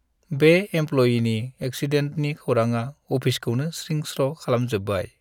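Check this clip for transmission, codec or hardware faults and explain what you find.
No faults detected.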